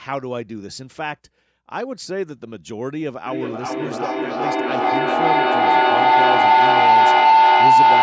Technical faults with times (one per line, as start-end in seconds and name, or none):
3.26-8.02 feedback howl